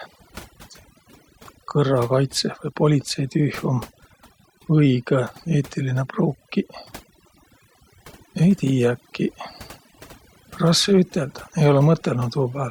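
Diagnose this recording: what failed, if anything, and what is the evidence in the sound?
The failure is overdone noise removal at the processing stage, present for the whole clip. Between phrases the background falls to near silence, broken only by brief twinkling specks. A noise reduction stage set too aggressively is switching off individual frequency bands whenever their level sits close to its noise estimate. The quieter components of the voice fall in that range and are removed along with the noise.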